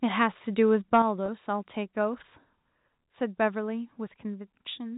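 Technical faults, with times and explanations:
0.93 to 0.98 s, microphone overload: peaks push about 4 dB past the converter's ceiling and get flattened, giving a brief harsh crackle, likely from input gain set too high.
1.02 s, microphone volume stepped down: level drops suddenly by about 5 dB right after that distorted peak, likely the call software pulling the input gain down in one step.
1.26 to 1.28 s, packet loss with pitch repetition: one 20 ms chunk goes missing and the last pitch period gets repeated to cover it, so you hear a short, slightly buzzy held tone.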